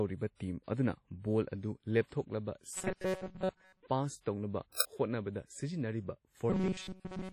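Across the whole speech clip the sound is ringing and washy, with a hiss that rises and falls with the signal and a heavy smearing of detail. The likely cause is WMA compression at a low bitrate, around 32 kbps. Unlike a band-limited codec, content still reaches about 20.1 kHz, so the damage is transform smear rather than lost treble.

From 2.75 to 3.83 s the speech turns into a rigid, metallic buzz at 188 Hz that only loosely follows the original. This is robotic sound from repeated short buffers, likely caused by audio repeating in cycles of about 5.3 ms while most of the real signal is skipped. Its fixed buzz pitch sets it apart from codec warble.

At 4.80 s a single crack lasting about 5 ms marks an uninitialised buffer: a block was played before audio was written to it, so leftover memory came out as samples. It is an isolated burst of foreign noise, not a gap or a repeat.

From 6.50 s to the end, the same robotic buzz at 188 Hz returns, with the same repetition pattern as the earlier section.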